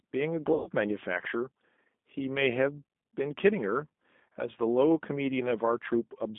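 Throughout, the speech carries plainly audible G.729 codec damage, a rough, slightly synthetic quality consistent with an 8 kbit/s codec rebuilding each frame from a filter, pitch predictor and a few pulses. A spectrogram shows energy confined to roughly 200 Hz to 3.6 kHz, with nothing above.

From 0.54 to 0.70 s comes VoIP packet loss concealed by the speech codec. About 120 ms went missing, which fits six 20 ms packets, and the decoder stretched the last frame into a fading buzzy tone or coloured noise. The waveform shows a smooth, repetitive, decaying stretch, and the spectrogram shows flat smears.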